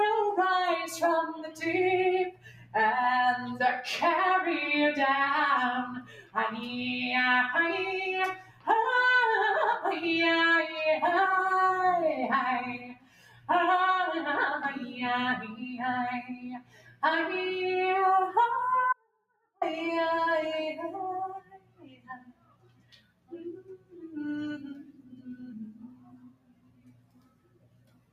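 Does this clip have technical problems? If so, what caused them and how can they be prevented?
Yes. A noise suppressor applied to music or sounds runs through the whole clip: a processor built for speech treats steady, sustained material as noise, so held sound and tails are pushed down by about 15 dB while attacks survive. The level pumps and thins out. To prevent it, bypass speech noise suppression whenever the source is not speech.

Sound cut by the noise suppressor is heard at 1.35–1.62 s, 2.31–2.75 s, 6.01–6.37 s, 8.35–8.67 s, 12.78–13.49 s, 16.22–17.03 s, 21.39–24.07 s and 24.83 s to the end. In each span the suppressor judged the sustained or decaying sound to be noise and sank it, by about 9 dB at 1.35 s and up to about 18 dB later, cutting decays short. The same fix applies: turn the suppressor off or set it to a music mode.

An audio dropout to a faint residue runs from 18.93 to 19.61 s, about 0.69 s. 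The sound cuts out abruptly and only a faint leak remains, about 40 dB below normal level, likely because the signal was lost upstream while the path after the break stayed live. To prevent it, check the connections and source feed for interruptions.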